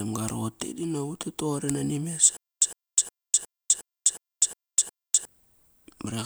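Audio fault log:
2.37–5.25 s, stutter with silent gaps: a 108 ms fragment of the speech replays eight times, each burst followed by about 252 ms of dead digital silence, so the pattern repeats every 361 ms with a rigid, mechanical pulse. This is likely a playback or stream stall in which each retry re-emitted the last buffered fragment and then ran dry. The speech that belonged in those three seconds never arrives; it is simply missing.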